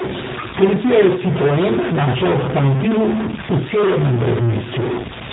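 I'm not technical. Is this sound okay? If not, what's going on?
No. Most likely a stuck bit: one digit of the digital audio stays fixed instead of changing, so many sample values come out wrong. Throughout the clip this adds distortion, and the quiet gaps between speech fill with hiss instead of silence.

The speech also went through the G.729 codec, a heavily squeezed phone-call format that rebuilds the voice from a simplified model. From start to finish nothing above about 3.8 kHz remains, so the speech sounds muffled, rough and somewhat synthetic.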